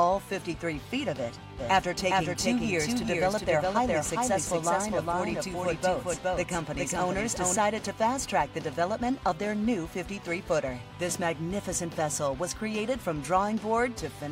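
From 1.59 s to 7.57 s a second copy of the audio, about 5 dB quieter, trails the original by a little under half a second, starting and stopping abruptly with no decay or room colour. This doubled audio track is likely a second capture through a slower path mixed in.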